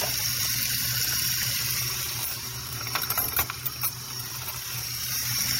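A brief stutter at 3.23 to 3.26 s, where a sliver of sound plays twice in a row. This is repeated frames: a compressed block of about 26.1 ms, which fits a single codec frame, was decoded again, adding 26.1 ms.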